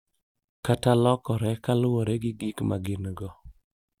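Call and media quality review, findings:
Nothing to flag on this speech clip; no audible faults anywhere in the recording.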